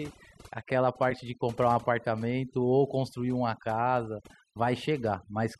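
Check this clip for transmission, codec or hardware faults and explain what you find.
Overdone noise removal runs through the whole clip. A noise reduction stage set far too aggressively drives individual frequency bands down wherever they sit near its noise estimate, taking quiet parts of the speech with them, so the background drops and breaks up into twinkling specks.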